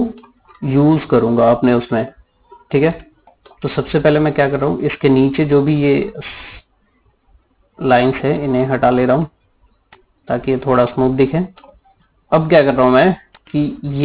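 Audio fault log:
Throughout: aliasing. Content above 4 kHz has folded back below that edge as unrelated, inharmonic tones roughly 25 dB under the main signal, giving a gritty, metallic edge, which fits an 8 kHz resample done without an anti-alias filter.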